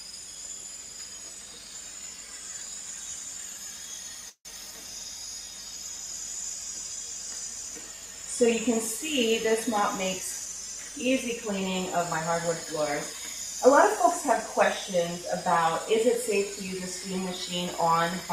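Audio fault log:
4.29–4.47 s, call audio freeze: sound stalls and is stretched as a fading buzz, with about 80 ms of near-silence at the end. The gap is likely from held-up packets. On a spectrogram it shows as smeared horizontal bands dropping to a dark band.
11.98–13.15 s, jitter buffer speed-up: sound runs about 6% fast at unchanged pitch as short pitch-period pieces totalling roughly 70 ms are cut out. On the waveform the cycles keep their length, with whole cycles missing at tiny splice points.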